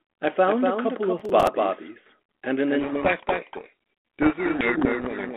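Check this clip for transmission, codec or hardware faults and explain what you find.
Three problems turn up on this telephone-band speech clip, which runs over 32 kbit/s G.726 with only light coding damage.

Throughout there's a doubled audio track: a second copy trails about a fifth of a second behind, roughly 5 dB quieter, with no decay. A slower capture path likely picked it up twice.

From 1.20 to 1.47 s there's processor overload crackle. Around seven buffers of about 10 ms each missed their deadlines and replayed old audio, giving a gritty, tearing crackle.

From 2.80 s to the end there's a codec payload misread. The G.726 code words arrive in the wrong bit order, so the decoder's output buries the speech under harsh, grinding distortion.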